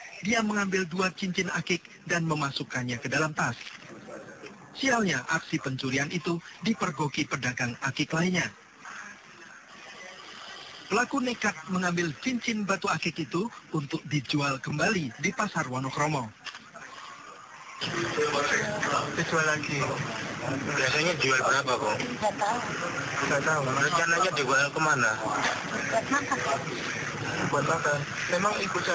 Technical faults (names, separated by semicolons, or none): none